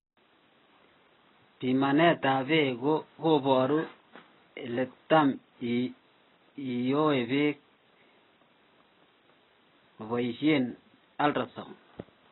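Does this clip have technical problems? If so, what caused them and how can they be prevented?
Yes. The speech sounds dull and smeared the whole way through, with nothing above 4 kHz and a warbly, fizzy edge on sibilants. That's likely heavy AAC compression, which fits a bitrate around 18 kbps, low enough that the encoder cuts the top off and starves the rest. Encoding at 64 kbps or more would avoid it.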